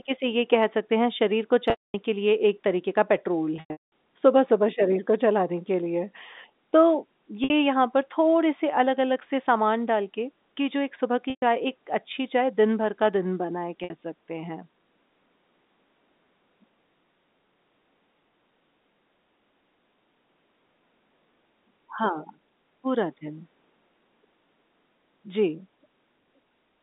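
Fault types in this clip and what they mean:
Packet loss with pitch repetition: audio packets failed to arrive, and the receiver covered each gap by looping the last pitch cycle and fading it out over about 50 ms. The 60 ms losses at 7.44 s and 13.84 s sound like a briefly held, buzzy tone. The longer gaps at 1.7 s (240 ms), 3.56 s (320 ms scattered over 360 ms) and 11.3 s (120 ms) decay into silence before the sound cross-fades back.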